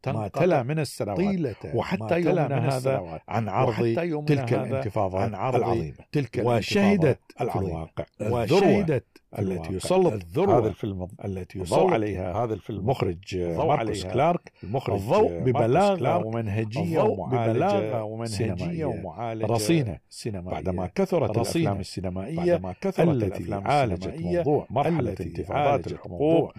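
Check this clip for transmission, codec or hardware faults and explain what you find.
A doubled audio track runs throughout the speech. A second, full-band copy of the audio trails the original by about two seconds, some 5 dB quieter, with no decay or room colouring, so it is a clean replica rather than an echo. The likely cause is the same signal being captured again through a slower path and mixed back in. It sounds like a ghost voice repeating everything two seconds late. On a spectrogram, every pattern reappears two seconds later, slightly fainter. The waveform shows the same envelopes shifted along in time.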